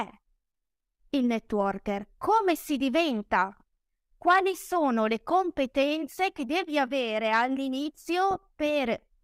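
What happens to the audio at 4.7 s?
At 4.7 s the speech carries on without any break, dropout or added artefact, and the audio is intact at that moment.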